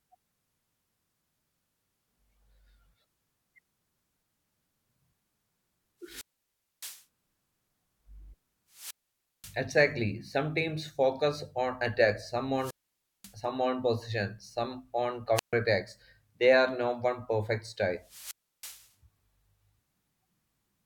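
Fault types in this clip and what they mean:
Wireless microphone squelch dropout: the radio signal fades, hiss rises, then the receiver mutes. That happens five times here, leaving near-silent holes of 0.14 to 0.61 s.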